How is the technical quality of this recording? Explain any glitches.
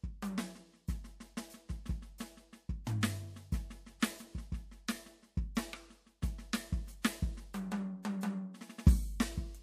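The music carries a recurring codec fault: pre-echo at 2.84–2.87 s, 3.01 s, 4.00–4.02 s, 7.02–7.04 s and 8.03–8.05 s. The codec spreads quantisation noise across a whole block, so the noise meant for each sharp attack also fills the quiet moment before it. That noise rises about 11 to 17 dB for roughly 16 to 23 ms, heard as a brief hiss ahead of a softened, smeared onset. The smearing fits a block of about 36 ms that never switches to shorter blocks for transients.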